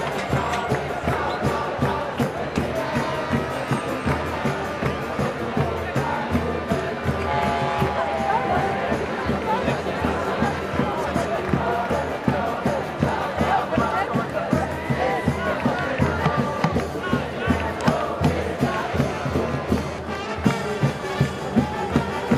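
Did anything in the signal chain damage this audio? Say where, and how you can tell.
No, nothing along the chain left a mark I can hear, so there's no damaged stage to point to in this one.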